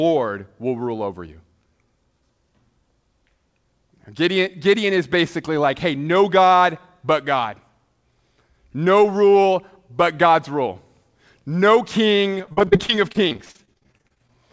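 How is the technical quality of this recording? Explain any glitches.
The recording has one clear glitch near the end. From 12.38 to 14.32 s, repeated packet loss (robotic sound) breaks up the speech. Dozens of brief gaps, up to 45 ms each, are patched by extending the previous sound. About a third of that stretch is filled in, so the voice turns choppy and robotic. The audio also stops at 8 kHz, which fits a G.722 call path.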